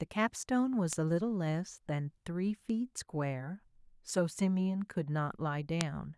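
Three sharp, isolated ticks cut through the speech at 0.93 s, 2.70 s and 5.81 s. Each is a single broadband click, unrelated to the sound around it. The last is the loudest, peaking at about -9 dBFS, the first reaches about -15 dBFS, and the middle one is faint at about -33 dBFS. These are bit error spikes: a flipped bit throws one or two consecutive samples off by a power of two before the waveform snaps straight back.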